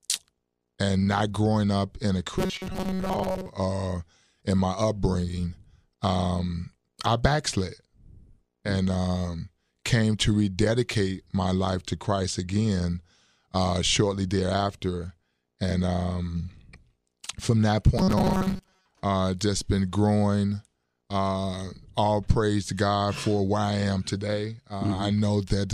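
Robotic sound from repeated short buffers appears twice in this speech, from 2.39 to 3.50 s, after "growing up in a" and before "uh in my upbringing", and again from 17.98 to 18.85 s, between "from that" and "uh just been growing". Each time the voice becomes a stiff metallic buzz at 188 Hz. The likely cause is starved playback looping a roughly 5.3 ms slice for most of the span while fresh audio is dropped.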